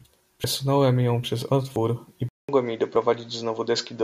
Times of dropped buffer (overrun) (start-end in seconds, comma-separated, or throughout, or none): 0.44, 1.76, 2.96